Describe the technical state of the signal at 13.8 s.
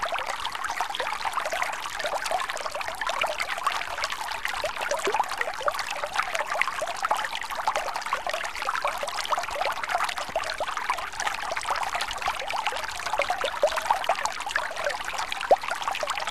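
At 13.8 s the audio is intact, with no dropout, clipping, glitch or other technical fault at that moment.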